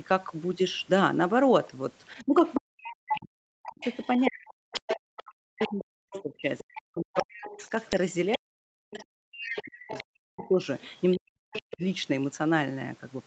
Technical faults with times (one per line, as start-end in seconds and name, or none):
2.10-3.20 other side's voice leaking through
2.26-10.60 speech suppressed in double talk
3.82-8.37 other side's voice leaking through
8.91-11.74 other side's voice leaking through
11.16-11.83 speech suppressed in double talk